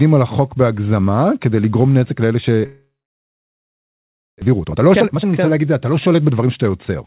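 At 2.66 s the audio stops arriving, and the gap runs until about 4.44 s. It sounds like a long network dropout is the likely cause. There's a brief fading tail where the receiver keeps the last sound going, then roughly 1.5 s of silence. When the audio comes back, about a second of the original is simply gone. The rest of the stall shows up as extra delay, roughly 0.7 s of backlog.

Right after that, from 4.45 s to 6.80 s, you get the jitter buffer speed-up as the receiver works off that backlog. It snips out short pitch-period chunks over and over, so the speech plays about 128% fast while the pitch stays put. It sounds rushed. By the end it has trimmed out around 0.7 s, roughly the delay that built up. All of this sits on a narrowband call path with nothing above 4 kHz, which fits G.711 mu-law at 64 kbps.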